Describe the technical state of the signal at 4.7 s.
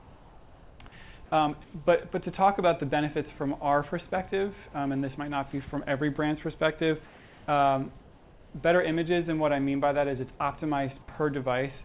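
At 4.7 s the signal is intact, with no dropout, glitch or other fault, only the ordinary narrowband character of the G.711 call path, which leaves nothing above 4 kHz.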